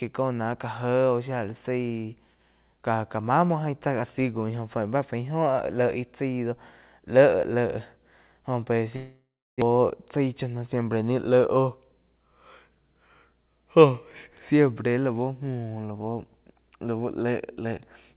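From 8.96 s to 9.76 s the speech breaks off. The last sound is drawn out into a buzzy or hissy tail that fades, followed by about 320 ms of silence before speech resumes, with part of what was being said gone. This is likely a long network dropout. About 600 ms of audio never arrived, and the receiver spent roughly 656 ms concealing the gap by stretching the final sound before giving way to silence, then picked up again without the lost stretch.

Shortly afterwards, from 10.19 s to 10.59 s, the speech sounds briefly hurried, running at about 108% speed while the pitch stays unchanged. This is a jitter buffer speed-up. Having built up more delay than it wanted, the receiver trimmed a series of pitch-period-length slices, around 40 ms in total, to catch up. The rushed quality sits on top of the narrowband sound of the G.711 call path, which has nothing above 4 kHz.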